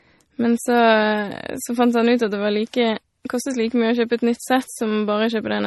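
Throughout the speech, the audio likely went through transcoding between lossy codecs: an earlier encode, plausibly WMA, then a low-rate MP3 that fits roughly 32 kbit/s. Nothing remains above 11.8 kHz, and both codecs' artefacts are heard together.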